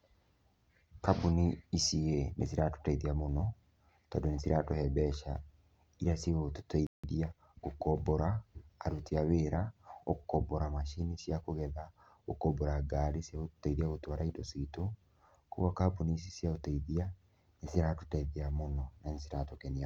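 At 6.87 s the speech cuts to silence for 169 ms, a playback stall. The player likely ran short of data. At 7.04 s it resumes. From 7.04 to 7.70 s comes time-compressed catch-up. The speech runs hurried, about 1.25 times normal speed, at unchanged pitch.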